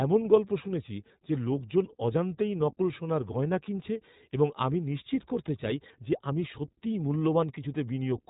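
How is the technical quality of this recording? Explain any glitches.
The recording is clearly degraded by low-rate voice coding across the whole clip. The speech has passed through the iLBC codec, which codes each 20 ms frame's excitation independently of the previous frame, at a rate that fits its 15.2 kbps mode. The encoder discards everything above about 3.8 kHz, so the speech sounds narrow and muffled. The coarse frame-by-frame modelling adds a plainly audible rough, synthetic edge from start to finish.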